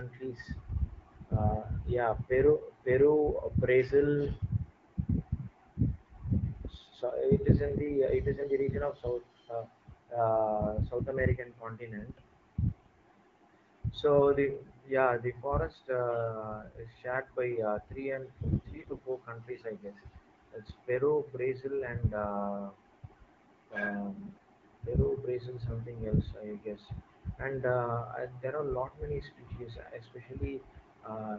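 AMR bit errors hit three times: from 8.35 to 8.50 s, between "it is" and "the region of"; from 18.48 to 19.01 s, between "three and" and "four countries I guess"; and from 24.10 to 24.44 s. Around 7 percent of the weakly protected bits in the wideband AMR frames arrive flipped while the core checksum still passes, so excitation pulses land wrongly and pitch, gain and spectral detail drift. The speech keeps its pitch and level but turns hoarse, scratchy and gargly.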